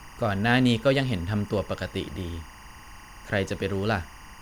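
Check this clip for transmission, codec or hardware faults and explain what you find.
Timecode bleed runs through the whole clip, from start to finish. Linear timecode from a nearby track or cable is leaking into the audio path. The code is a square wave that flips between two pitches near 1 kHz and 2 kHz as its bits change. Its repeating frame pattern fits 23.976-frame-per-second code. The result is a steady, chirping warble sitting roughly 25 dB beneath the speech.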